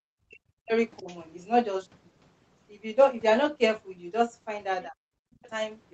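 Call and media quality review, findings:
Speech suppressed in double talk: talker's voice dips in short stretches at 0.0–0.05 s, 0.59–0.73 s, 1.0–1.07 s, 4.87–4.99 s and 5.35–5.44 s, sinking by up to about 40 dB. The likely cause is the echo canceller treating overlapping far-end speech as echo and turning the whole microphone signal down.

Other side's voice leaking through: faint second voice under the talker at 0.32–0.36 s, 0.97–1.16 s and 5.34–5.5 s, roughly 25 to 30 dB below the main speech. This is likely residual loudspeaker echo that the echo canceller didn't fully remove from the microphone path.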